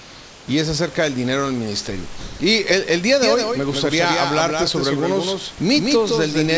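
Speech carried over a wideband call path with nothing above 8 kHz, where the room's own background sits about 23 dB under the voice. From 0 to 0.48 s that background is replaced by comfort noise: a smooth, featureless hiss, about 2 dB quieter, with none of the room's texture. This is likely discontinuous transmission, where the sender pauses while its voice detector hears nothing and the receiver fills the gap with synthetic noise shaped to the background. At 2.20 to 2.40 s the sound is dropped by the voice detector. For 200 ms the speech gives way to the same flat noise, and about 180 ms of real sound goes missing until transmission resumes. The detector probably judged a quiet stretch to be background and stopped sending, so the receiver covered the gap with generated noise. From 3.23 s to the end, a doubled audio track sets in. A second full-band copy of everything trails roughly 150 ms behind, around 5 dB quieter. 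It has no reverberant tail or room colouring, and it switches on abruptly rather than swelling in. This points to the same signal being mixed in twice, likely through a slower second capture path or an edit that left two misaligned copies.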